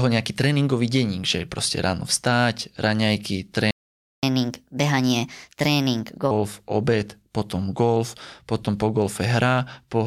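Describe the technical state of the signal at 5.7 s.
At 5.7 s the player is in a catch-up at higher speed, running from 4.23 to 6.31 s after a stall. It resamples its backlog at 1.25 times normal rate, so the speech runs quick and sits roughly four semitones sharp before dropping back.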